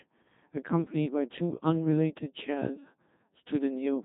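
From start to finish the speech passes through a Codec 2 vocoder, heavily damaged, and the coarseness fits its 2.4 kbit/s mode. Only pitch, voicing, energy and spectral envelope survive; the decoder rebuilds everything from sine waves, leaving a robotic, buzzy voice with no original waveform.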